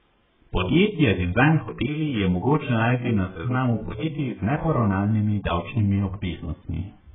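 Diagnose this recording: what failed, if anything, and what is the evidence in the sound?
Codec stage: speech throughout is dull and smeared, a spectrogram showing nothing above 3.8 kHz, which fits likely AAC compression starved at about 8 kbps.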